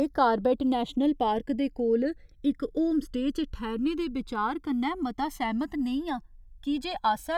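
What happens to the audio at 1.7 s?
At 1.7 s the channels are drifting apart, as they do throughout. A small clock mismatch slowly grows the inter-channel delay, so comb notches sweep like slow flanging.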